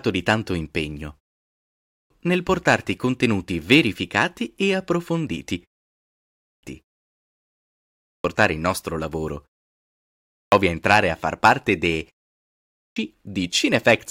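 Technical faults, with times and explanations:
1.53, 6.02, 7.62, 9.87 and 12.4 s, clipped start after a pause: after short pauses of 0.37 to 0.87 s, speech resumes abruptly without its opening (after "di tanto impegno", "contenuti verificati e approfonditi" and "il nostro lavoro"), losing 0.56 to 0.65 s each time, because the output device sleeps in silence and wakes too slowly.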